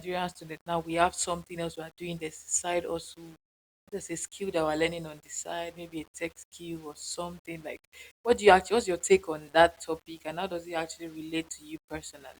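Throughout, gritty distortion follows the speech and quiet tails sputter: low bit depth without dither, likely 9-bit rounding. The waveform is stair-stepped, and the spectrogram shows signal-tracking hash about 30 dB down.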